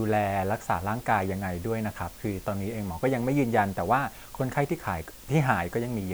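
Low bit depth with dither runs from start to finish, heard as a constant, even hiss sitting only about 20 dB below the speech. The noise level fits a resolution of around 7 bits. Dither was added before the samples were rounded to so few levels, so the rounding error became steady white noise that doesn't follow the signal. There is no gritty distortion on the speech, just a uniform hiss that stays the same through pauses and loud passages alike.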